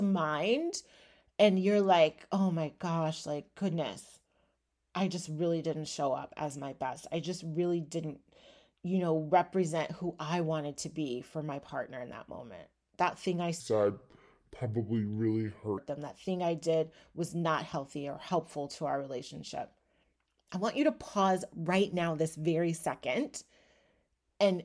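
From 13.6 s to 15.78 s, just after "thing I", the speech drops into a wrong sample rate fault. Audio captured at 32 kHz is being played back at 22 kHz with no conversion, so it runs at about 0.69 times normal speed and sinks roughly 6.5 semitones, sounding low and dragged out. On a spectrogram the harmonics and formants shift downward and spread out in time across that stretch. The waveform shows slower, wider cycles.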